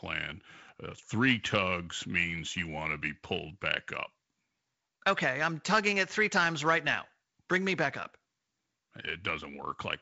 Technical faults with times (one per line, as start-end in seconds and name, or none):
none